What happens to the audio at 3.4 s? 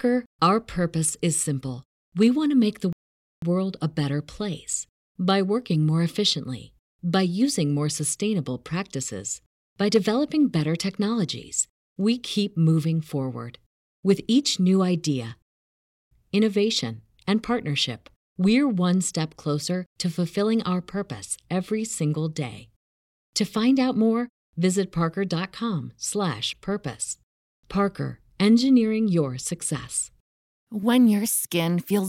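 At 3.4 s the speech is just coming out of a rebuffering stall that began at 2.93 s. After "want to make the", the player ran short of downloaded audio and went silent until more data arrived, resuming at 3.42 s with "world a better place". The gap adds about 0.5 s of silence, but nothing is skipped. Unlike a dropout or packet loss, the speech picks up exactly where it stopped.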